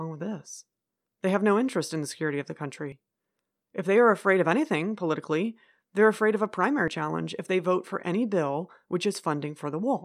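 Speech clip with two quick skips at 2.92 s and 6.88 s, roughly 40 ms each, four seconds apart, likely audio missing between chunks as recording segments rolled over.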